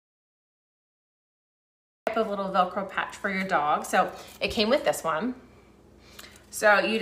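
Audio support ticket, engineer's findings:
Audio dropout to silence, 0 to 2.07 s, already in progress at start: silence, no room tone. Likely input loss, such as a disconnected device, with silence written meanwhile.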